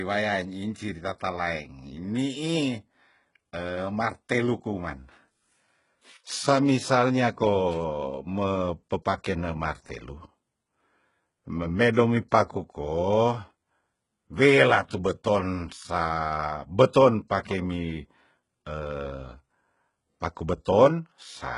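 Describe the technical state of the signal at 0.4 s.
At 0.4 s the speech shows heavy damage consistent with likely HE-AAC compression, present throughout the clip. Nothing remains above about 11.1 kHz, and the upper band sounds synthesized from copied lower content, giving gritty, lispy sibilants, which fits a very low bitrate near 12 kbps.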